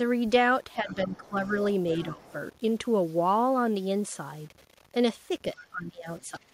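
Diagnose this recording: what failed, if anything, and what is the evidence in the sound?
A grainy distortion runs through the whole speech clip and tracks the signal, sitting roughly 30 dB below it and roughening the quiet tails rather than hissing steadily. That is low bit depth without dither, likely from a sample-format conversion that rounded to something like 8 bits. Because the error is tied to the signal, it changes with the sound and vanishes in true silence, unlike a constant noise floor from analogue wiring or a converter.

The talker's speech dips between 0.76 and 1.52 s, briefly at 2.12 to 2.28 s, and again from 5.54 s to the end, falling by around 10 to 15 dB, for about half a second in the first and last stretches. This is speech suppressed in double talk, likely the call processing's echo canceller ducking the near talker while the far side also spoke. The gaps line up with the far voice, which separates them from codec or network dropouts.

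A second voice comes through faintly, roughly 25 to 30 dB under the talker, at 0.89 to 1.28 s, 1.71 to 2.33 s, 5.56 to 5.64 s and 6.19 to 6.23 s. This is the other side's voice leaking through, likely loudspeaker echo that the echo canceller in the call processing did not fully remove. It overlaps the suppression dips, the canceller's two failures together, rather than being crosstalk in the wiring, which would be continuous.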